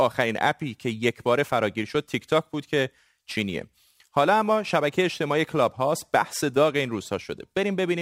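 From start to finish, the speech carries a gritty, inharmonic fizz that rides on its louder and brighter sounds, sitting roughly 25 dB below the speech. This is crude rate conversion. Samples were simply repeated at the nearest position instead of being properly filtered, which fits a change from 44.1 kHz to 48 kHz. The repeating error pattern creates shifted, inharmonic copies of the speech.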